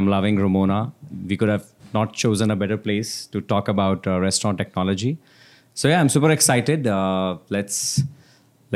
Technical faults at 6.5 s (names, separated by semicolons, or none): none